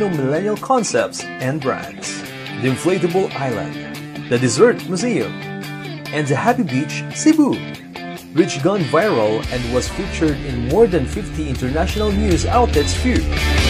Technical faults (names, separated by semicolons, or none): none